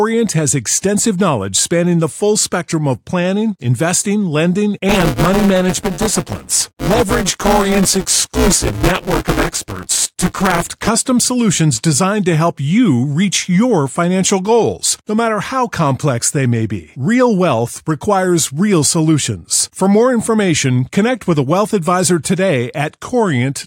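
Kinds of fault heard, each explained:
Buffer tearing: the program writing the ring buffer and the hardware reading it have slipped, so they cross mid-period and most of each chunk is audio about 10 ms old, hard-joined in. After "plans planning investing lending" comes a robotic 188 Hz buzz, fitting a 256-sample buffer.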